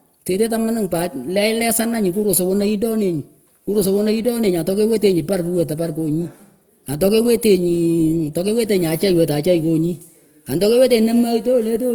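Speech with Opus compression running throughout: the voice has a rough, grainy texture, with tonal parts smeared into noise, which is likely the codec's music mode filling starved bands at a low rate, consistent with about 24 kbps, while bandwidth still extends to about 20.2 kHz.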